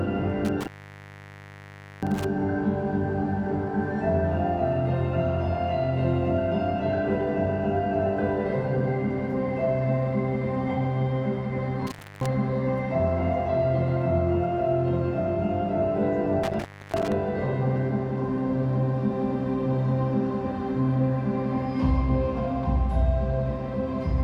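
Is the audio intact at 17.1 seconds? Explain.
No. From 16.43 to 17.12 s there is an intermittent contact: a loose plug or cable briefly opens, cutting the sound for about 0.3 s. Crackle marks the edges and faint hiss remains, unlike a clean digital dropout's silence.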